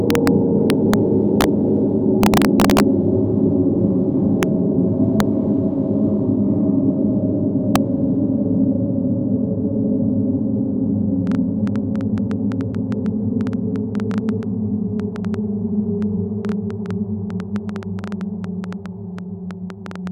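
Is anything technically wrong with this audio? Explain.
Yes, two kinds of fault are audible.

Integer overflow occurs from 0.10 to 0.27 s, 0.70 to 0.94 s, 1.41 to 1.44 s, and 2.23 to 2.80 s, and at 4.43, 5.20 and 7.76 s. Loud peaks push only slightly past full scale, by about 0 to 2 dB. Instead of being held at the limit, they wrap to the opposite extreme. Each wrapped peak becomes a full-range jump, heard as a harsh, violent crack far sharper than ordinary clipping.

A train of clicks runs from 11.27 s to the end at 20.08 s. Around fifty similar clicks arrive at an uneven pace averaging about 6.5 per second, with peaks standing a few decibels above the sound itself. They are heard as an irregular ticking or popping laid over the audio, including any quieter passages. Such a steady injection of near-identical pulses likely comes from electrical interference or a faulty connection or power supply.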